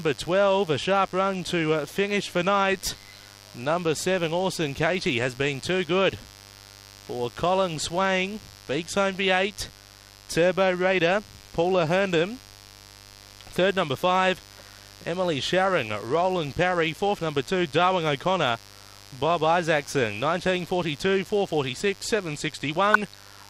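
A raspy buzz sits under the whole clip, and it's mains buzz on a 50 Hz supply. Something like a dimmer, a rectifier or a missing shield has let sharp switching spikes into the signal twice every mains cycle, so you get a dense stack of 50 Hz harmonics climbing well into the kilohertz range. It stays at roughly 25 dB below the programme, steady and gritty rather than a smooth hum.

Right at the end, from 22.93 to 23.14 s, there's a short patch of DAB burbling. Reception was weak enough that bit errors, at a rate of a few tenths of a percent, slipped past the error correction into the MP2 audio data. Corrupted samples put short blips of noise into individual sub-bands across nine frames. It comes out as short noise blips over the audio.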